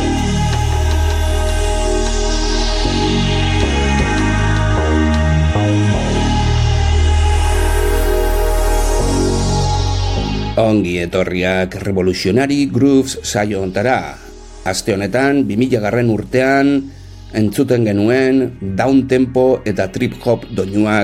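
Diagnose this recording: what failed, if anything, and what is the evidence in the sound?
Nothing failed; no stage shows any audible fault.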